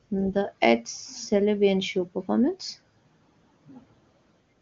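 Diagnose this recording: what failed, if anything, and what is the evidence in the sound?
Nothing failed: the speech carries no content above about 7.1 kHz, consistent with an AMR wideband (HD Voice) codec path running near its top 23.85 kbit/s mode, and no stage shows a defect.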